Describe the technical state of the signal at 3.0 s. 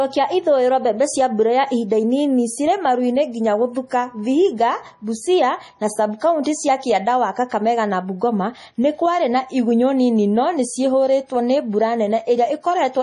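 Likely heavy MP3 compression, present throughout the clip, starves the speech of bits: nothing above 11.5 kHz remains, and the watery, swirly texture points to roughly 32 kbps.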